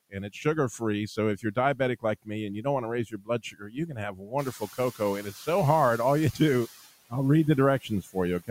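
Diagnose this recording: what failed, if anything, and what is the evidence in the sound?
The failure is in call processing: speech cut by the noise suppressor. After "don't want to raise", from 3.1 to 4.33 s, stretches of speech drop by up to about 16 dB, for well over half a second in total. Shorter dips follow at 5.22 to 5.48 s, about 12 dB down, and after "I'll read" at 7.82 to 8.15 s, about 14 dB down. The suppressor mistook quiet speech for noise and turned it down.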